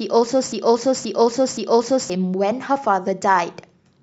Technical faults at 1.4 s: broken-record loop

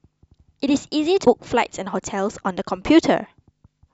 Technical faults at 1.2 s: damaged data in a compressed stream

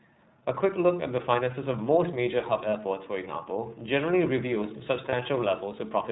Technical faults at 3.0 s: iLBC codec

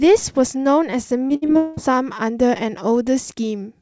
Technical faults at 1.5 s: repeated packet loss (robotic sound); long network dropout

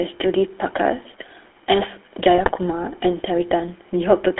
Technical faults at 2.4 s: GSM full-rate codec; GSM bit errors

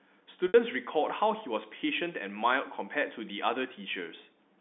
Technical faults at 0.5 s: packet loss with pitch repetition

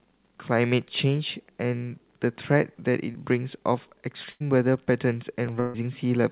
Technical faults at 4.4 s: clock drift buffer slips; burst of packet loss

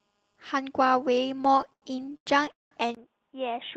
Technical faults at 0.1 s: none

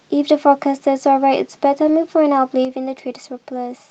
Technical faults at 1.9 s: lost packet rebuilt from error correction

